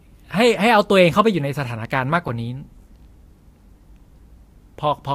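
At 2.28 s an underrun with held sample flattens the speech for about 6 ms as the converter holds its last value; playback then resumes where it stopped, so the restart is soft.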